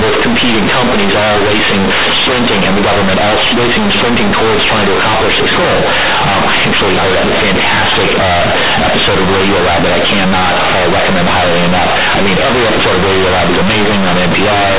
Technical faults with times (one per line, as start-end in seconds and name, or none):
0.00-14.78 companded audio read as linear